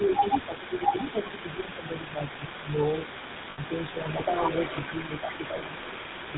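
The whole recording has a buzzy, gravelly roughness, with nothing above 4 kHz. This is the GSM full-rate codec at 13 kbps. It models the vocal tract and drives it with a sparse, regularly spaced pulse excitation, and that coarse excitation is what makes the damage plainly audible.

Also running the whole way through is a delayed, fainter copy of the voice, about 10 dB below it and trailing by 417 ms. This is an echo leak. A loudspeaker at the far end was likely picked up by its microphone, and the echo canceller let part of that return through.

The speech dips or thins between 0.47 and 0.85 s, 1.14 and 1.38 s, 1.55 and 2.22 s, 2.38 and 2.45 s, and 5.08 and 5.32 s. It falls by up to about 10 dB in the first two stretches and by only a few dB in the others. This is speech suppressed in double talk. It likely happened because the echo canceller could not tell the local talker from overlapping far-end sound, so it turned both down.

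From 3.50 to 3.59 s the sound freezes into a rough, metallic ring for 80 ms, which fits four lost frames. A shorter 20 ms ring follows at 5.58 to 5.61 s. These are lost GSM frames. The decoder covered each gap by repeating the last good frame's settings.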